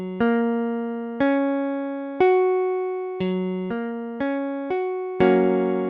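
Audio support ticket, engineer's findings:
No audible faults found. Nothing to escalate.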